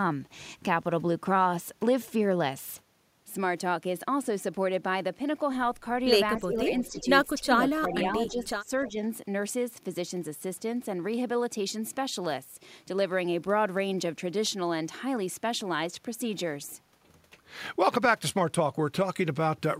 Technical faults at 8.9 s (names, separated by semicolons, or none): echo leak; speech suppressed in double talk